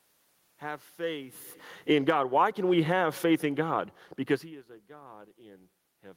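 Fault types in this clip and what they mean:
automatic gain falling: From 1.75 s to 3.07 s the gain control judges the input too loud or its background noise too strong and pulls its gain down by about 8 dB over more than a second. The voice and the room noise sink together, which separates it from the talker's own shift in distance near 1.5 s. On a waveform the envelope tapers steadily, and on a spectrogram the whole band, noise floor included, darkens evenly across all frequencies.
automatic gain rising: Starting at 2.27 s, while the downward move is still under way, the control reverses and lifts its gain by about 5 dB, reaching the new level by 3.35 s. Speech and background swell up together over roughly a second. The waveform shows the envelope bottoming out and then widening again, and the spectrogram shows the noise floor and the speech brightening together, with no frequency band changing more than the rest.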